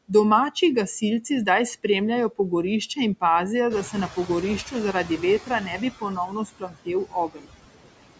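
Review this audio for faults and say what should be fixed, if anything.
Noise suppressor artifacts run through the whole clip. The suppressor treats steady background as noise and pulls it down by about 21 dB, frame by frame, so the floor drops away in the gaps and comes back up under the speech. To prevent it, use a gentler suppression depth or a quieter microphone position, so less noise has to be removed.

Noise suppressor catching up runs from 3.70 to 5.89 s. Just after "in pazijo", at about 3.5 s, the room noise jumps by about 13 dB. The suppressor's noise estimate still reflects the quieter background, so at first the louder noise comes through with only about 11 dB of reduction. It then sinks gradually over the roughly 2.19 s the estimate takes to adapt. To prevent it, use a suppressor whose noise tracking responds faster to sudden level changes.

Speech cut by the noise suppressor occurs at 4.93–5.22 s, 5.42–6.88 s and 7.06–7.51 s. 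In these spans the suppressor mistakes parts of the speech for noise and turns them down along with the background, by about 8, 16 and 20 dB at the deepest points. The first span loses only a brief moment, the second around half a second, and the third a few tenths of a second. Soft sounds and word endings come out swallowed or faint. To prevent it, lower the suppression aggressiveness or raise the speech-protection threshold, so quiet speech is not classed as noise.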